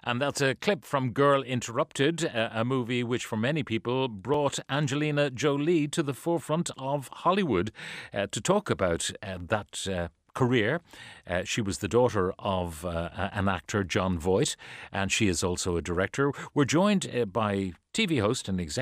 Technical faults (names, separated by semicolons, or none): repeated buffer